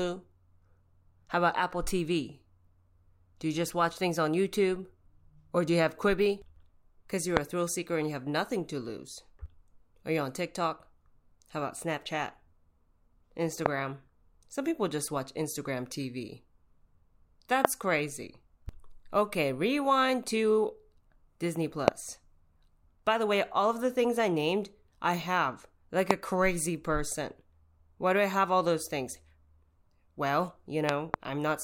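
Speech with loud pops at 7.37 s (before "a thrill seeker and"), 13.66, 17.65, 21.88 and 26.11 s (between "named I have like" and "crazy person"), plus a double pop from 30.89 to 31.16 s. Each stands roughly 20 to 25 dB above the speech, a tall waveform spike and thin full-height spectrogram line, likely from an electrical voltage glitch.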